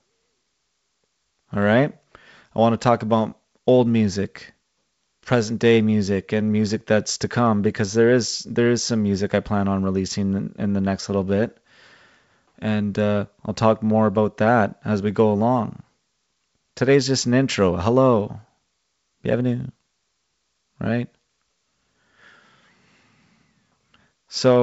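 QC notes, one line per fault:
Nothing stood out on listening; the speech carries the light upper-band hiss and the 7.7 kHz ceiling expected of G.722 wideband telephone coding at 56 kbit/s.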